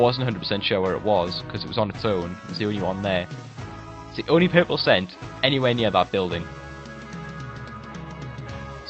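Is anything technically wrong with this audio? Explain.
No, nothing technically wrong here.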